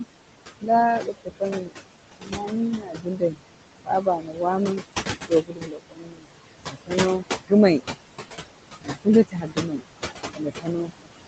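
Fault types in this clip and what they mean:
Noise suppressor artifacts: The suppressor works on each frequency band, frame by frame, and turns down whatever it judges to be steady noise. Here it pulls the background down by about 20 dB. The room noise sits only about 7 dB below the speech, so the suppressor has to work hard. The noise sinks in the gaps and swells back under the talking.
Speech cut by the noise suppressor: The suppressor mistakes parts of the speech for noise and turns them down along with the background. This happens between 0.61 and 7.81 s, where roughly three seconds in total are affected, with drops of about 22 dB at worst. It happens again from 8.81 s to the end, with drops of about 21 dB at worst. The parts it turns down sound swallowed or faint.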